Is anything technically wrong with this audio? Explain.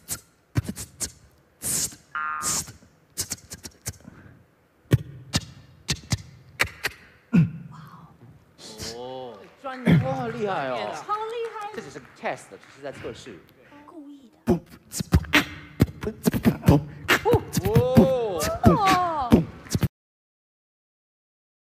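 Yes. The audio has a cut-off end at 19.87 s. The sound stops mid-event and drops straight to silence, with no natural decay. The last buffers were never written or played back, so the recording simply ends where that data ran out.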